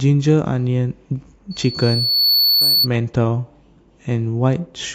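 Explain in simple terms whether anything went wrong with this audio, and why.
A loudspeaker feedback squeal appears from 1.51 to 2.88 s: a single 4.4 kHz tone swells over most of a second into a shrill whine louder than the speech. Unlike a steady interfering whistle, it grows by itself as microphone and loudspeaker feed each other.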